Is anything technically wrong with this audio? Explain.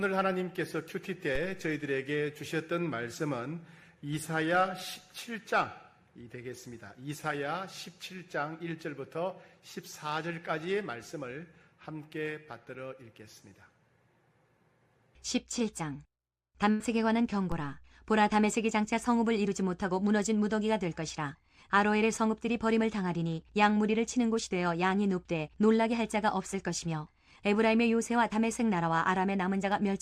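Yes, there are two kinds of fault.

A DC step occurs at 1.35 s and again at 17.52 s. At each point the waveform's zero line jumps abruptly, as happens when a converter recalibrates or an input carrying an offset is switched in. The offset then drains away slowly, behaving as if a high-pass filter at about 2 Hz were pulling it back to centre. Each jump is heard as a low thump or click, and the sound itself continues unchanged.

A burst of packet loss runs from 16.70 to 16.81 s. A run of audio packets was lost or arrived too late to be played. The receiver covered the gap of about 93 ms by extending the last sound it had and turning it down progressively, which leaves a held, fading buzz or hiss. When playback resumes, roughly 90 ms of the original audio is missing, so the sound jumps forward slightly.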